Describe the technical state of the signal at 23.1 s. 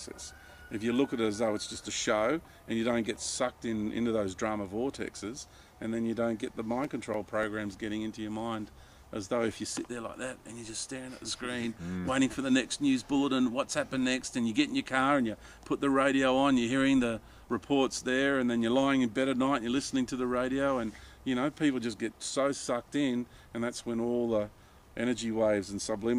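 At 23.1 s the signal is intact, with no dropout, clipping, glitch or other fault audible at that point.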